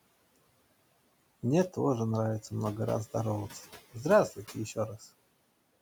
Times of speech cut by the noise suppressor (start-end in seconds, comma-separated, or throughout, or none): 4.30-5.10